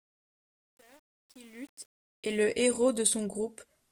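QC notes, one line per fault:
0.0–2.4 s, truncation distortion on a fade: the fade-in was rendered without dither at a coarse word length that fits an 8-bit stage, so the quietest part, worst up to 2.21 s, turns gritty before the level smooths out.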